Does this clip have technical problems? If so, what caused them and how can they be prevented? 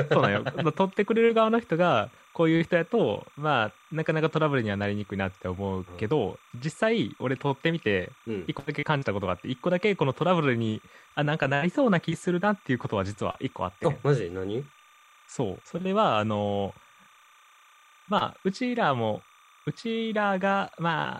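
Yes. Timecode bleed runs through the whole speech clip as a thin chirping warble, roughly 30 dB below the voice. Linear timecode from an adjacent track or cable is leaking in: its square wave flips between tones near 1 kHz and 2 kHz, and the pattern repeats at 29.97 frames per second. A spectrogram shows faint, unbroken bands near 1 kHz and 2 kHz with their harmonics, even through pauses. Keeping timecode lines physically separated, shielded and on isolated tracks prevents this.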